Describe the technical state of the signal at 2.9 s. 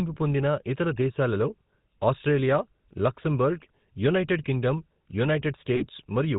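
At 2.9 s the speech is passing through the GSM full-rate codec, as it does for the whole clip. The codec reduces the voice to a vocal-tract filter driven by a sparse, regularly spaced pulse train, discarding two of every three excitation samples, which fits a 13 kbps stream. Nothing above 4 kHz survives, so the speech sounds band-limited and dull, with a plainly audible buzzy, gravelly roughness layered over it.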